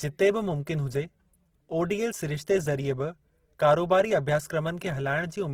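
The whole clip carries plainly audible Opus compression, likely from its music (CELT) mode at a starved rate, around 16 kbps by the sound of it. The speech stays fullband, reaching about 20.2 kHz, but bands get refilled with folded or noise content, so it comes across grainy and rough.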